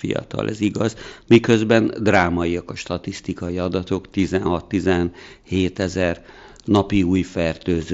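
At 3.48 s there is a brief concealed Bluetooth headset packet loss, about 15 ms of audio. The receiver filled the gap by repeating the closest-matching recent stretch of waveform. A single loss of 7.5 ms follows at 5.77 s, half as long, and it is nearly hidden. The mSBC link carries the speech with light graininess.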